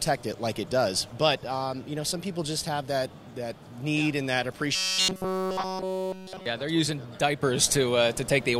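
From 4.75 to 6.46 s the sound goes robotic, a rigid metallic buzz pitched at 188 Hz. That's likely the robotic sound from repeated short buffers: essentially all of that stretch is a roughly 5.3 ms chunk replayed over and over while the fresh audio gets skipped.

At 7.43 s there's a sudden gain jump of about 7 dB that holds right to the end. The sound and the background noise step up together in one go, which likely means a digital gain change applied without any ramp.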